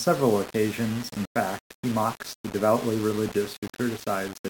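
From the start, the speech carries grainy distortion that rises and falls with the voice instead of sitting underneath it as steady hiss. The likely cause is low bit depth without dither: rounding to about 5 bits leaves error only about 15 dB below the signal, and because that error tracks the waveform, quiet passages crackle and break up rather than sinking into noise.

At 3.29 s, a short DAB burbling event appears. This burst of noise hits only certain frequency bands. Unlike the constant graininess, it is a brief burst, consistent with a few corrupted audio frames in which uncorrected bit errors threw individual sub-band levels off.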